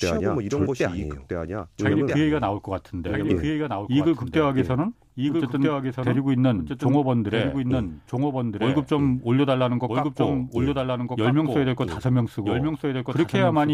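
From start to finish, every stretch of speech is followed by a second copy of itself, about 5 dB quieter, arriving about one and a half seconds later, so phrases pile over one another like an overlapping playback. The repeat is full-band, dry, and carries no room decay, which marks it as a doubled audio track rather than an echo. The likely cause is the same signal being captured twice, once through a slower path.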